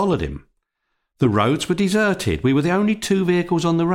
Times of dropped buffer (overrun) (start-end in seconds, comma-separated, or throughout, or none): none